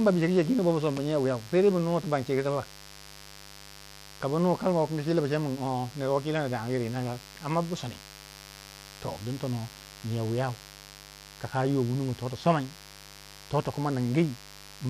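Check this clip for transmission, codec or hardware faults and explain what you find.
Two faults run through this speech recording: a constant mains buzz and a fast, regular series of clock slip clicks.

Mains buzz is present for the whole clip. Switching spikes from the 50 Hz supply leak into the signal, adding a raspy buzz about 20 dB below the speech. On a spectrogram it appears as unbroken horizontal lines at multiples of 50 Hz, reaching into the kHz range.

Clock slip clicks run from 0.16 s to 14.85 s, roughly twenty per second, several hundred in total. The likely cause is two devices running on unsynchronised clocks a few hundred parts per million apart, so a single sample is dropped or repeated at each slip. This produces a soft, steady rattle under the speech. A spectrogram shows faint, evenly spaced vertical streaks, and zooming into the waveform reveals tiny one-sample discontinuities.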